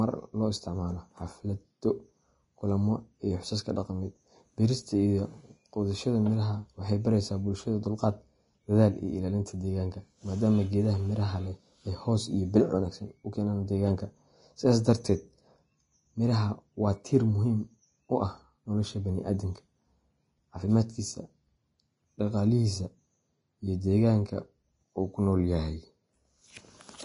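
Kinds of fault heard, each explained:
Vorbis compression: throughout the clip, the speech has nothing above 10.6 kHz, and the damage is plainly audible. It is likely low-quality Vorbis coding, which fits a bitrate near 28 kbps. At that rate the encoder draws a smooth spectral outline and spends very few bits on the detail riding on it, so the upper band is rebuilt as coarse, noise-like texture. The result is grainy, hissy treble and smeared consonant edges.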